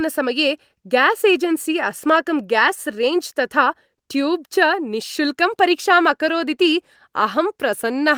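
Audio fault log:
No faults heard anywhere in this speech recording.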